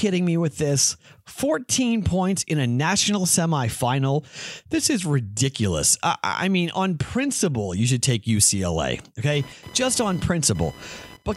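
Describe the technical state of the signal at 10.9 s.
At 10.9 s, computer activity noise is present, from 9.33 s to the end of the clip: shifting processor or peripheral load disturbs the shared audio ground, adding a buzzy chirping at roughly 1 kHz, about 20 dB below the speech.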